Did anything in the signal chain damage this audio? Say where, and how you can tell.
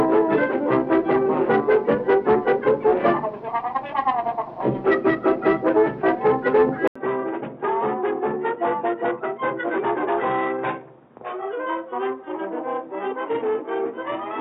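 Yes. At 6.88 s the audio drops out for 80 ms, then returns duller and a few decibels quieter, with nothing above 3.8 kHz and a new faint noise floor. This likely reflects the input switched to a poorer device at the driver stage, such as a narrower-band microphone.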